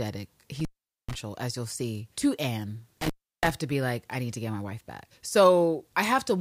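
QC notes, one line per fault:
0.59–1.14 s, intermittent contact: the speech drops out for roughly 440 ms, a loose plug or cable briefly losing its connection, so you get crackle as it breaks and remakes, with just faint hiss left while the line's open.
3.01–3.50 s, intermittent contact: same thing again, this time about 330 ms of dropout bracketed by crackle. The connection scrapes open and shut, and during the gap only low hiss gets through in place of the signal.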